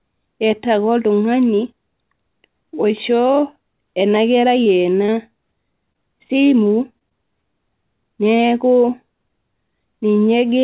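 From 4.64 to 5.10 s the speech breaks into repeated packet loss with a robotic sound. Four separate gaps fall inside half a second, each no longer than 21 ms. About 60 ms of audio never arrives, and roughly 66 ms of synthetic continuation fills the holes, about 14% of that span. Because each patch extends the previous waveform and the next gap follows almost at once, the passage turns choppy and robotic.

Short concealed packet loss follows at 5.93 to 5.96 s. Around 20 ms is missing, and about 18 ms of extrapolated signal covers the hole before blending back into the real audio, leaving a brief smear. A second instance sits between 6.28 and 6.45 s. Again about 20 ms is lost, but only about 10 ms is concealed, and the timeline gains a small extra stretch, heard as a slight wobble.

At 6.99 to 7.03 s there is a short stall from a late packet. The jitter buffer ran dry, and the receiver held the last sound for about 26 ms until the packet turned up, then resumed from the same point. 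Nothing is lost, but the sound lingers with a faint buzz or dip.

A third short concealed packet loss at 7.09 to 7.13 s drops about 20 ms, covered by roughly 15 ms of fill, giving a quick smear. Throughout, the call path passes nothing above 4 kHz, which fits a 64 kbps G.711 mu-law codec.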